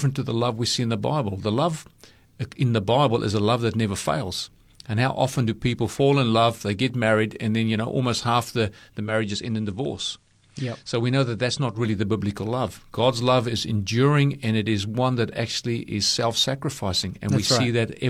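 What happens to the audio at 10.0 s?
From 8.99 to 11.85 s the receiver is in digital radio blending to analogue. After "almost half the the" it cross-fades over 165 ms to the station's FM signal, about 4 dB quieter, with hiss roughly 40 dB down, returning before "the biblical love". The gradual fade and added hiss distinguish it from an abrupt codec dropout.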